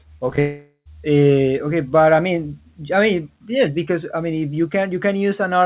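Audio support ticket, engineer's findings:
Short concealed packet loss, 0.30–0.34 s and 0.36–0.39 s: two brief smears, about 20 ms missing each, gap bridged by decoder continuing preceding sound. Spectrogram: preceding content smoothly repeated, slightly blurred; waveform: no true silence. Jitter buffer/PLC.

Long network dropout, 0.39–0.87 s: about half a second of sound lost, likely from a network outage. Continuation buzz fades out, with about 100 ms of silence before real audio resumes mid-stream. Waveform: decaying envelope then flat line; spectrogram: stretched, fading continuation, then blank. Narrowband call path, nothing above 4 kHz.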